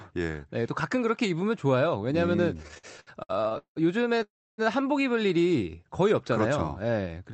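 From 2.57 to 3.78 s the packets kept arriving late, so the jitter buffer ran dry sixteen times. That causes repeated stalls (stutter). The receiver stretched the last sound across each wait, the longest 182 ms, filling about 40% of that stretch. The audio drags and stutters, though nothing is lost.

At 4.22 s the sound halts for about 0.36 s before resuming at 4.60 s, most of that pause silent. This call audio freeze is likely from packets held up in transit that emptied the buffer. A gap is inserted, and nothing is skipped.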